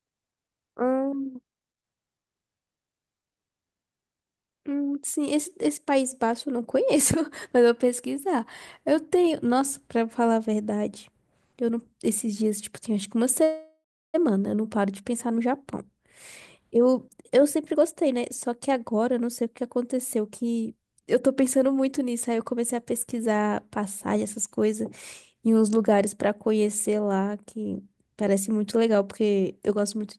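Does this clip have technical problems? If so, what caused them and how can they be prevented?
Yes. From 13.43 to 14.16 s there is a call audio freeze, likely caused by packets stalling in transit until the jitter buffer ran dry. The receiver stretched the last sound into a fading buzz that falls to about 340 ms of silence. The audio then resumes where it stopped, so roughly 0.7 s of gap is inserted and nothing is lost. A steadier network path, or a somewhat deeper jitter buffer, would keep the buffer from running empty.

From 16.76 to 22.01 s there is a jitter buffer speed-up. After the stall, the late packets arrived together and overfilled the buffer. To shed the extra delay, the receiver cut out many tiny pitch-period slices, about 0.7 s in total. The speech runs at about 113% speed with unchanged pitch and sounds hurried. Gentler, slower adaptation of the buffer target would spread this catch-up more thinly and make it less noticeable.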